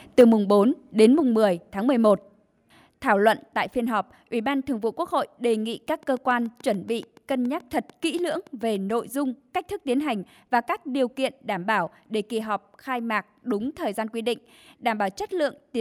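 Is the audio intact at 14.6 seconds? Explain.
Yes, the audio is intact at 14.6 seconds, with no dropout, click, distortion or other fault at that point.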